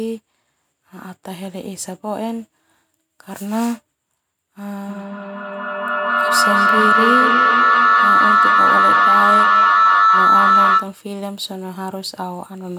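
From 4.88 to 11.03 s, feedback howl builds around 1.5 kHz, pulsing roughly every fifth of a second. A mic-to-speaker loop is gaining each trip, peaking about 9 dB above the speech.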